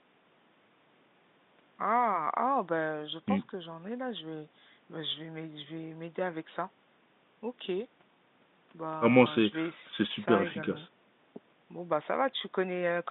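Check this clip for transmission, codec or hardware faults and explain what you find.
Nothing in the speech points to a transmission, codec or hardware fault; it sits in a narrow telephone band of roughly 150 Hz to 3.7 kHz, which fits ordinary G.711 telephone coding at 64 kbps working as intended.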